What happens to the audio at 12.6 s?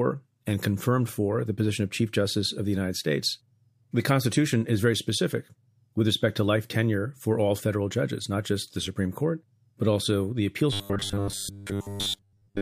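Robotic sound from repeated short buffers runs from 10.73 s to 12.62 s, where the clip ends. The speech becomes a rigid metallic buzz at 100 Hz, which fits a 10 ms slice being replayed for most of that stretch, likely because new audio arrived too seldom.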